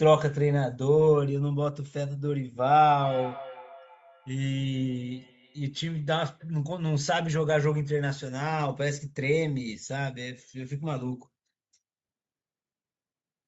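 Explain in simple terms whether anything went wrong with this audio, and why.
From 3.0 to 6.6 s, a feedback echo between two devices repeats the speech about every third of a second, unlike room reverb's smooth fade.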